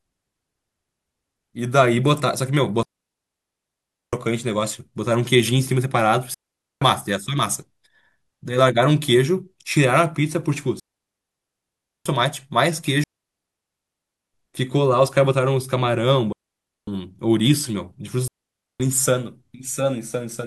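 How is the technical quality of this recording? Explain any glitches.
The speech is repeatedly cut by a digital wireless dropout, six times: 2.83–4.13 s, 6.34–6.82 s, 10.80–12.06 s, 13.04–14.34 s, 16.33–16.87 s and 18.28–18.80 s, each between about half a second and 1.3 seconds long. Each time, the wireless link lost too much data and the receiver muted with a very brief fade. You hear a clean hole of near silence with no noise burst on either side. On a waveform these are flat gaps; on a spectrogram they are blank vertical bands with sharp edges.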